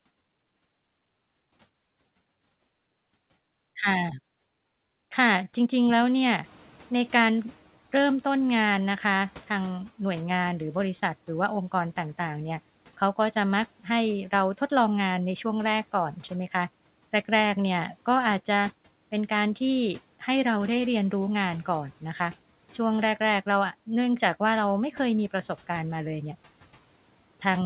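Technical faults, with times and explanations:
6.43–9.91 s, noise suppressor catching up: room noise jumps around 6.5 s and comes through with less reduction at first, then sinks about 9 dB as the suppressor's estimate adapts over 3.48 s.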